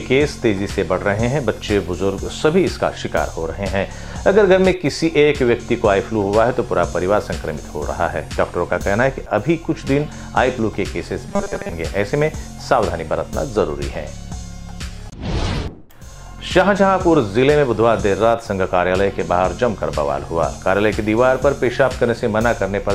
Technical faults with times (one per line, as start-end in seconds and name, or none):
11.29-11.73 robotic sound from repeated short buffers